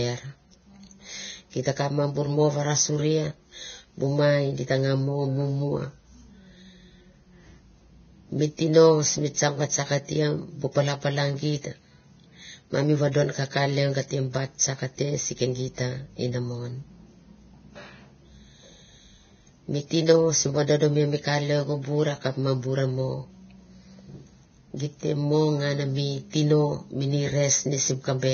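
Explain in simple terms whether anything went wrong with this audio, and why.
Yes, something went wrong, and it lasts the whole recording. The speech sounds hissy and grainy from start to end. The starts of sounds are blurred, and voice tones sound rough. Everything above about 6.6 kHz is simply gone, so the sound is dull. The likely cause is heavy Vorbis compression. The file was squeezed so hard that fine detail got replaced by a noisy wash.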